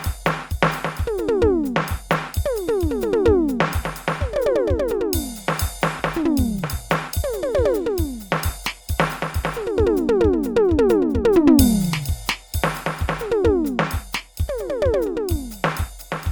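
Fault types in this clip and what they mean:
Skip ahead: At 6.0 s the music jumps abruptly forward with no gap. About seven-tenths of a second of audio is missing and the two sides are butted together. A stretch of audio was dropped while later audio was already waiting, so playback lurched ahead.
Jitter buffer speed-up: The music runs hurried at unchanged pitch, about 11% fast from 6.16 to 8.30 s and about 6% fast from 9.64 to 10.13 s, so the tempo wavers. The receiver trimmed tiny pitch-period slices repeatedly to shrink an overfull buffer.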